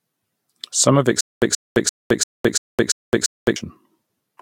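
From 1.21 s to 3.56 s the speech breaks into a stutter with silent gaps. A burst of about 129 ms plays, then about 213 ms of silence follows. The pattern repeats every 342 ms, seven times over. Each burst is the same fragment. The likely cause is a stalled player or stream that replayed its last fragment on each retry, then ran dry. The audio meant for that span never plays.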